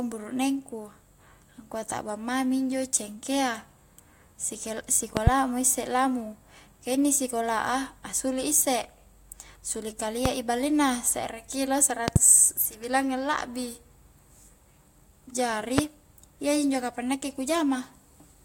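Loud pops hit at 5.17–5.30 s and 12.08–12.18 s as quick pairs, and singly at 10.26–10.28 s and 15.78–15.81 s, roughly 20 dB above the speech, about 25 dB for the 12.08 s pair. A likely voltage spike from a switch, static or glitch jolts the signal while speech continues underneath.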